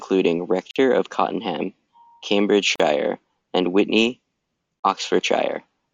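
Gaps at the joins of encoded pieces interrupt this speech at 0.71 to 0.76 s, 2.76 to 2.80 s and 4.80 to 4.84 s, spaced every 2 s. Each is a short silence of about 47 ms for the first and 40 ms for the other two, with softened edges. The speech then resumes where it stopped. Each piece was encoded on its own and joined untrimmed, so encoder start-up silence and end padding remain at every seam.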